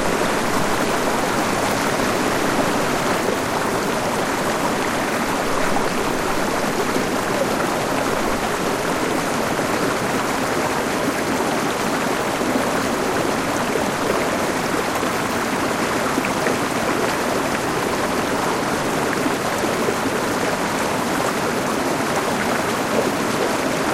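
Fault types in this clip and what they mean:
Doubled audio track: From the very start until about 3.2 s, the sound is heard twice, with a second full-band copy trailing by roughly 150 ms at about 5 dB below the original, likely because the audio was captured again through a slower path. On a waveform, each transient has a smaller twin a fixed distance behind it. A spectrogram shows every event repeated at the same offset with identical shape and no decay tail, and the copy stops abruptly at 3.2 s.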